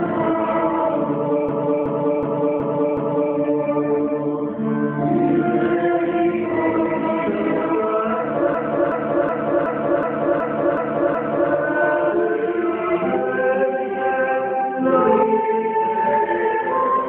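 The audio freezes into a system hang loop twice. From 1.49 to 3.34 s, one 0.37 s slice repeats exactly five times. From 8.55 to 11.52 s, the same length of slice repeats eight times. The loop rate is 2.69 Hz. That is slow enough to sound like a lurching stutter, not a buzz. The driver or host stopped supplying new audio. The hardware kept replaying its ring buffer, and the loop length fits a 16384-sample buffer. Zipper noise appears at the very end, from 16.77 s to 17.09 s. The level falls by about 10 dB in coarse steps, roughly twenty a second. There is no smoothing between steps. Each jump puts a small click into the waveform, and together they make a fast ticking over the fade.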